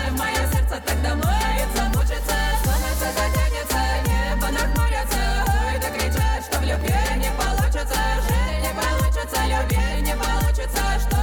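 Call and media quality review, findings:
Processor overload crackle, 6.64–6.87 s. Short burst of gritty crackle over the sound. Probable cause: CPU load causing repeated missed buffer deadlines. Roughly seven buffers, roughly 1.5 ms each, dropped to silence. The hard-edged gaps produce the tearing texture.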